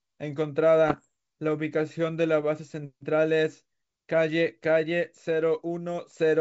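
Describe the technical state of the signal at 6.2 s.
At 6.2 s the speech signal is intact, carried through G.722 wideband telephone coding at 64 kbit/s, with the band up to about 7 kHz present and at most a faint trace of the coding.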